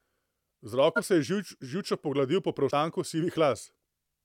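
The speech jumps ahead at 0.95 to 1.00 s, where about 20 ms of audio goes missing, and again at 2.70 to 2.73 s, where roughly a tenth of a second drops out. These are compressed frames skipped: whole frames never reach playback, so the audio leaps ahead by a multiple of the frame length.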